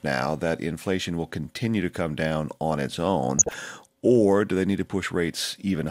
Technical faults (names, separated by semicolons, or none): DAB burbling